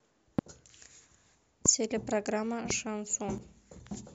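A loud pop lands at 0.39 to 0.41 s, with two more at 1.66 to 1.68 s and 2.70 to 2.73 s. Each is a single sharp click, roughly 20 dB above the speech for the first and roughly 15 dB for the others, with the speech continuing beneath it. A voltage pulse from a plug, switch, static or driver glitch is the likely cause. On a waveform each shows as a tall, narrow spike. On a spectrogram it is a thin vertical stripe across all frequencies.

From 3.38 s to the end, one channel drops out. When the channels are combined to mono, the speech common to both sides falls abruptly by 6 dB, and anything present only in the lost channel disappears. The waveform envelope steps down to about half its height at that instant and stays there. A spectrogram shows a sudden, uniform dimming across the band rather than any change in spectral shape.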